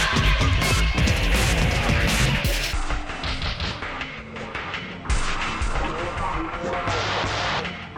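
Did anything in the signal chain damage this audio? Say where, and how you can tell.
Yes. From 2.73 s to the end of the clip, the audio plays at half speed: everything stretches out and drops roughly ten semitones, and speed and pitch shift together at that point rather than gradually. That coupling identifies it as a section at the wrong speed, not a pitch effect. The likely stage is playback or a sample-rate mismatch in editing, where this portion was clocked out at half its intended rate.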